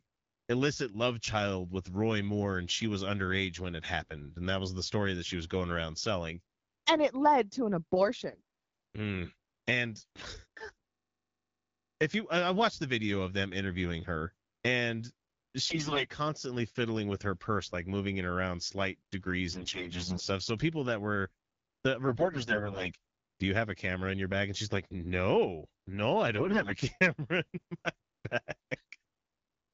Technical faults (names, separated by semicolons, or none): AMR bit errors